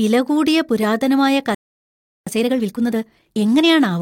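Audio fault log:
1.55–2.27 s, playback stall: right after "കൂടിയ പുരാതനമായ" the speech just drops out for about 0.72 s, then resumes. That's most likely the player running dry on data or getting its output thread held up, so nothing reached the output until it recovered.
2.27–3.71 s, time-compressed catch-up: once playback resumes, the speech runs at 1.5x speed but keeps its normal pitch. The player is clawing back the backlog by snipping out small slices and cross-fading across the gaps.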